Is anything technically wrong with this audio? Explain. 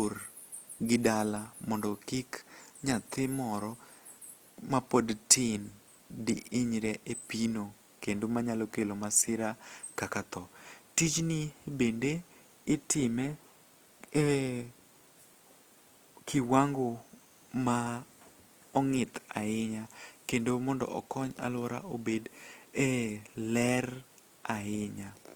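Yes. Throughout the speech, the sound is grainy and rough, with a noisy, textured edge where tones should be clean, though the top end still reaches about 20.2 kHz. This is likely Opus compression in its music mode, filling starved bands with noise, which fits a bitrate near 24 kbps.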